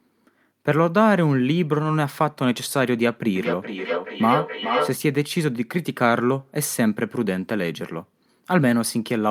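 From 3.36 s to 4.97 s the speech picks up a feedback echo between two devices. A second device in the same room is playing this call out loud, and the microphone here captures that playback and sends it back. The local echo canceller only suppresses its own device's output, so the loop goes unchecked. Each stretch of speech returns roughly every 0.4 s, thinner and more ringing, and peaks at about 2 dB below the direct speech.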